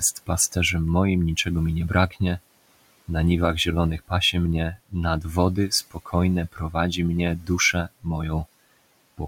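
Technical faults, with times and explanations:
4.74–4.95 s, 5.91–6.14 s, 6.52–6.75 s and 7.39–7.5 s, speech cut by the noise suppressor: the suppressor mistook brief stretches of speech for background and pulled them down by about 11 to 19 dB, so those moments sound swallowed and faint against the room noise.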